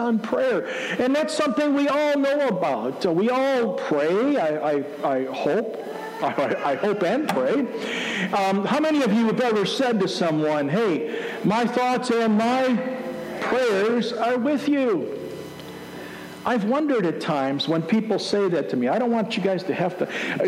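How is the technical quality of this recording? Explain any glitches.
Nothing in the recording stands out as a glitch, so there's nothing here that needs explaining.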